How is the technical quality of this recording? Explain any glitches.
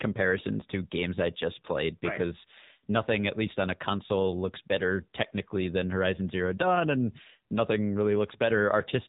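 The recording is compromised by a single fault. Throughout, the AMR narrowband mobile codec caps speech below 4 kHz and rebuilds it from sparse pulses, giving a plainly buzzy, synthetic tone that fits roughly 7.4 kbps. Simple band-limiting would only sound dull.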